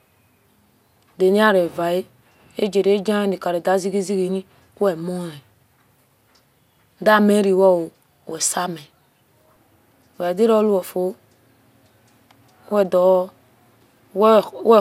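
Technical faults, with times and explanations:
Throughout, generation loss: the speech sounds swirly, hollow and smeared, with blurred onsets and nothing above 16.7 kHz. This fits MP2 at 128 kbit/s, likely re-encoded around five times, each pass requantising on a shifted frame grid so noise and spectral holes accumulate.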